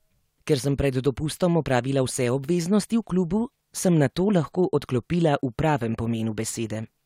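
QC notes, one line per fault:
No audible faults found; nothing to log.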